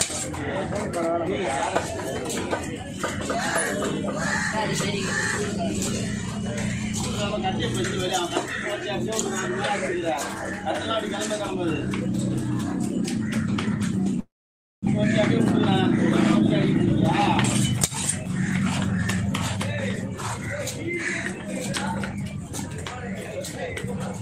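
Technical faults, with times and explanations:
14.19–14.89 s, long network dropout: the sound turns into a short buzzy continuation of its last moment, which fades out. About 0.55 s of near silence follows, and then the audio resumes with about 0.6 s missing and its timing shifted slightly. The likely cause is packets that never arrived, with the receiver stretching the last sound to cover the gap. A spectrogram shows smeared horizontal streaks fading into a blank band, and the waveform shows a shrinking envelope that settles to a flat line.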